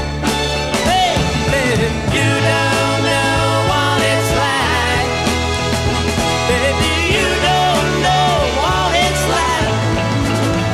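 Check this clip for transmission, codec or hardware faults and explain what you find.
No transmission, codec or hardware problems are audible here.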